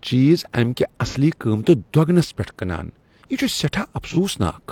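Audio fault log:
1.07–1.15 s and 4.04–4.17 s: AAC frame loss with concealment. Just after "چیز امہ کہِ" and again near the end, a roughly 43 ms gap, consistent with a single lost frame, is filled from the previous spectrum. The resynthesised patch sounds briefly smeared and noisy rather than silent.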